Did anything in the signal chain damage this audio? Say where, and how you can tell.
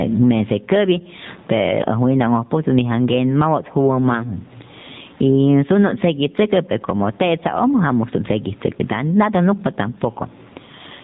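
Yes, two stages left clear marks, and both run through the whole clip. The first is gain pumping: the gain swings by around 20 dB. The room noise sits about 44 dB under the speech. That behaviour likely comes from input gain set far too high and a fast limiter or compressor clamping down on each loud syllable.

The second is the codec stage, AMR narrowband mobile codec, running at 7.4 kbps, and the damage is plainly audible. Everything above 4 kHz is gone, so sibilants lose their edge. The call's microphone high-pass only trims the lowest bass, which tells you the codec made that cut. At that bitrate the vocal-tract model works from a limited set of pulses per 5 ms subframe, so the speech comes out buzzy and synthetic, and the background turns into a swirly warble.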